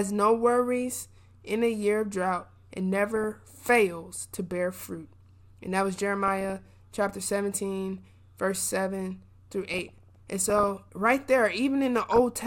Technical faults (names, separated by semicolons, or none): DAB burbling